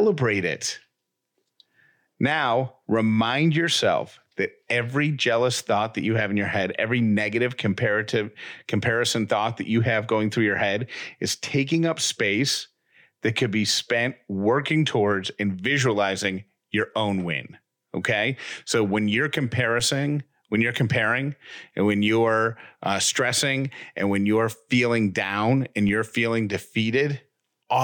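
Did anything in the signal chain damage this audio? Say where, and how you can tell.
Yes. There are two DC steps, where the converter or analogue input suddenly shifts the waveform's zero line by about −29 dBFS. The first comes at 19.80 s, just after "when you're". The second comes at 25.89 s, between "you're feeling down and" and "you're feeling". Each abrupt offset is heard as a low thump while the speech carries on untouched. A 20 Hz high-pass filter then pulls the offset back to zero over a moment.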